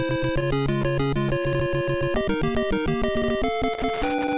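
Between 0.4 and 1.81 s the jitter buffer ran dry again and again: packets arrived late or more slowly than they were played out, so the receiver had to stretch the last sound to bridge each wait. There are 14 of these repeated stalls (stutter), none longer than 15 ms, adding up to about 171 ms of filled-in audio, roughly an eighth of that stretch. Nothing drops out, but the sound drags and hiccups repeatedly through the passage.

From 2.35 to 2.99 s comes a jitter buffer slow-down. With its reserve low or its target delay just raised, the receiver rebuilt headroom by repeating single pitch periods or fragments of pauses many times over. This inserts about 77 ms, so the passage plays at roughly 89% speed. The pitch stays the same while the timing stretches, and sounds in this span come out drawn-out and sluggish.

From 3.73 s to the end at 4.37 s there is loose connector crackle. A worn or dirty contact in the chain is making and breaking rapidly, chopping the signal on and off many times in quick succession. 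It is heard as an irregular burst of crackle and scratching laid over the audio, with no steady rhythm to it. Throughout, the audio carries nothing above 4 kHz, which fits a narrowband call codec.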